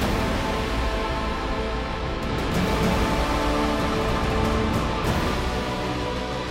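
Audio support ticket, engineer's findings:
Chunks out of order at 0.35–0.37 s and 4.11–4.13 s. Brief jumbled blip with hard joins. Each chunk about 11.6 ms. One chunk written one slot late, so it plays after its successor. Nothing missing.

Doubled audio track from 2.30 s to 5.35 s. Full-band copy trails the original by roughly 300 ms at about equal loudness. No decay, no room colour. Copy starts and stops abruptly. Likely a second, slower capture path mixed in alongside the main one.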